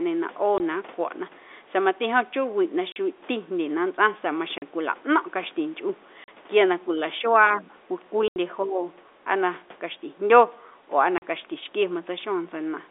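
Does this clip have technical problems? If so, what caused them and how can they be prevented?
Yes. Packet loss filled with silence leaves hard-edged holes at 0.58, 2.92, 4.58, 6.24, 8.28 and 11.18 s, lasting 20, 40 or 80 ms. All are multiples of 20 ms, which fits 20 ms packets. Unlike a suppression dip, each gap is total silence with hard edges. Packet loss concealment and a jitter buffer would help prevent it.

Speech suppressed in double talk shows up from 7.56 to 7.74 s and from 8.64 to 8.84 s. The sound sags by about 10 dB. The likely cause is an echo canceller ducking the talker while the far side spoke. Better double-talk detection in the canceller would prevent it.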